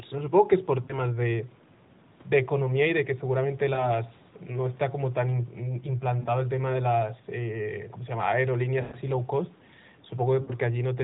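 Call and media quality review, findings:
Lost AMR speech frames at 0.84, 3.74, 6.20, 8.82 and 10.42 s. Radio errors fail frame checksums, and the decoder repeats the last pitch and vocal tract settings with falling gain. The result is brief dropouts, each lasting 0.1 to 0.2 s. The longest run, at 8.82 s, sounds drawn out and fading, consistent with a run of about six frames.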